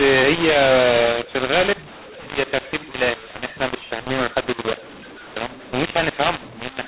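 From start to finish, the speech suffers a mu-law and A-law mix-up. Mu-law-coded samples are decoded as A-law, scrambling their levels. It sounds harsh and gritty, with hiss filling pauses. The waveform shows a raised floor between phrases, and the spectrogram shows broadband smear under a 4 kHz ceiling.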